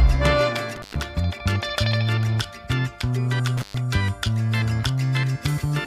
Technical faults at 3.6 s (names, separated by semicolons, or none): intermittent contact